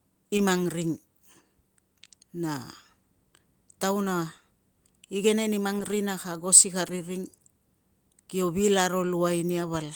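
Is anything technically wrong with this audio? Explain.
Yes. Three times, the connection lost packets of the speech stream, and each was covered by a lost packet rebuilt from error correction. At 0.37 to 0.39 s and 6.87 to 6.89 s, about 20 ms was restored, which fits one dropped packet. At 5.79 to 5.93 s, about 80 ms was restored, pointing to four separate losses. The following packets carried low-bitrate backup copies, and the decoder played those instead of leaving silence. So there is no dropout, only brief patches where the speech turns rougher and noisier.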